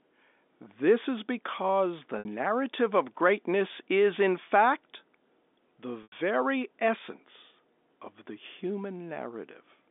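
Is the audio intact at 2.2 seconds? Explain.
No, right after "is because the" there's packet loss with pitch repetition from 2.19 to 2.25 s. The receiver looped the last pitch period over the 60 ms gap, giving a briefly held, buzzy sound.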